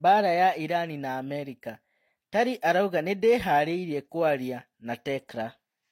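From start to finish, the speech carries the layered artefacts of transcoding between lossy codecs. Nothing sounds above 16.2 kHz. The mix of different artefacts fits a low-rate HE-AAC encode later re-encoded as Vorbis, which likely spent its bits re-coding the first codec's damage.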